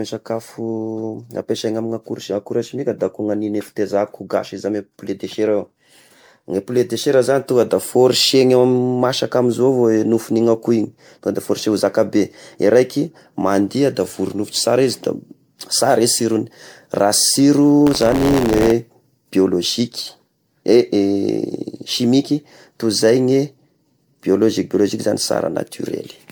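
From start to finish the speech sounds swirly, smeared and hollow. Consonant attacks blur. This is generation loss, most likely from re-encoding with MP3 around fifteen times. The setting was 128 kbit/s. But the damage is worse than that rate explains. Each pass quantised the sound again on a shifted frame grid. Noise and spectral holes built up with every round.

From 17.86 to 18.72 s a robotic buzz rides on the speech at 86.1 Hz. This is buffer tearing. The writing program and the playback hardware slipped out of step, so they crossed inside each buffer period. The buzz rate fits a 512-sample buffer. In every period a small slice holds audio from about 40 ms earlier. Hard joins sit on both sides of that slice. The rattle is heard only where there is signal.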